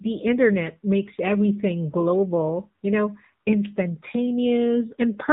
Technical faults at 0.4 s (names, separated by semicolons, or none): AMR narrowband mobile codec